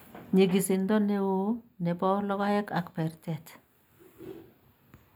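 From start to finish, the speech carries channel delay with comb filtering: one channel arrives a tiny fraction of a millisecond late, which fits a lag of only a few samples, and summing to mono cancels the shared sound at evenly spaced frequencies. The first notch sits around 7 kHz, so the upper range sounds dulled and phasey. Unlike a plain low-pass, energy partly returns above the notch, and unlike a phaser, the notch never sweeps.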